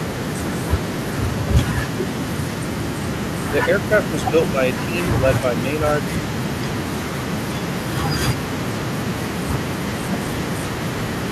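Speech suppressed in double talk at 3.5–3.56 s, 3.89–4.89 s and 5.41–5.66 s: the speech dips by up to around 10 dB in short patches, likely an echo canceller muting overlapping talk.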